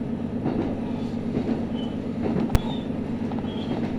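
At 2.55 s there is a single sharp bang caused by invalid numbers at full scale. A calculation in the processing chain produced infinite or undefined values, and these were forced to the largest value the format can hold. Because the affected block lasts only 5 ms, the start and end transitions merge into one click. On a waveform this appears as a thin flat slab pinned at one extreme, far beyond the audio's peaks. A spectrogram shows a bright vertical stripe spanning every frequency.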